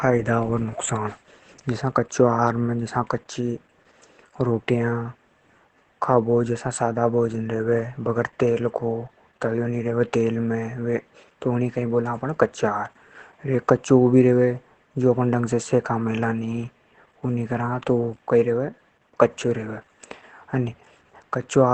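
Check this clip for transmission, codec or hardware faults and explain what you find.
One codec fault runs through the whole speech clip.

Opus compression, throughout: muffled, hoarse sound, likely from Opus switching to its speech mode at a rate fitting about 12 kbps. A spectrogram shows nothing above 8.7 kHz.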